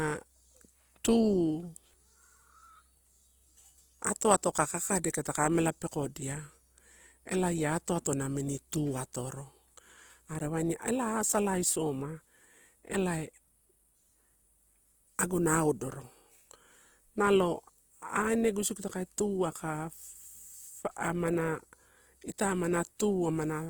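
Throughout the speech, the sound is rough and grainy, and voiced tones turn noisy. The cause is likely Opus compression in its music mode, filling starved bands with folded or noise content. The damage is plainly audible and fits about 24 kbps. Bandwidth still reaches 20.1 kHz.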